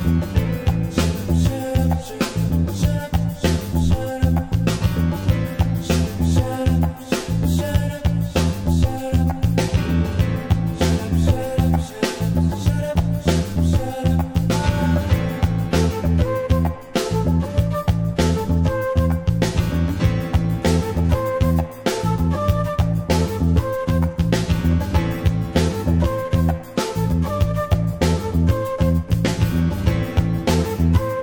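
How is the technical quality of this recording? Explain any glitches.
The recording has one real problem running the whole way through: channel delay causing comb filtering. One channel arrives around 10 ms late, and folding the two to mono cancels evenly spaced frequencies from around 40 Hz up. That leaves the sound hollow and phasey, with fixed notches.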